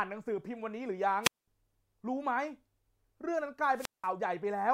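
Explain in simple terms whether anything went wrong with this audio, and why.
Twice the speech briefly cuts out: a short burst of hiss, then near silence for about 0.21 s (1.22 to 1.48 s) and about 0.18 s (3.74 to 4.09 s). This is a wireless microphone squelch dropout: the radio signal weakened and the receiver muted itself.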